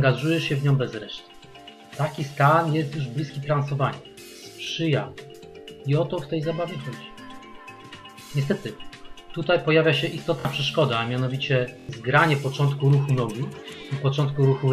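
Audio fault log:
4.64 s, 10.40 s and 11.80 s, repeated buffer: a 23 ms slice, fitting a 1024-sample buffer, replays once, twice, then four times as a hard-joined stutter, not a silent dropout.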